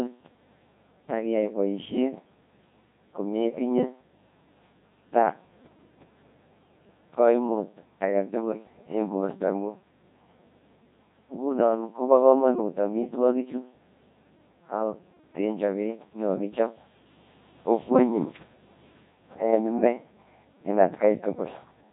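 Throughout the speech, a Codec 2 vocoder has replaced the original waveform. Only pitch, voicing, energy and a rough spectral outline survive, and sine waves rebuild the voice. The heavy damage sounds robotic and buzzy, which fits about 1.6 kbit/s. Nothing remains above 3.8 kHz.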